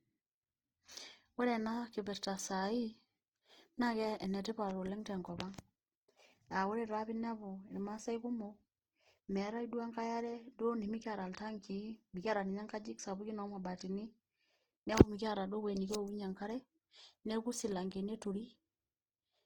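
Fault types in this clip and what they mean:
Opus compression: grainy, rough speech with noisy fill where fine detail should be, bandwidth reaching about 20.2 kHz; likely Opus music mode near 16 kbps.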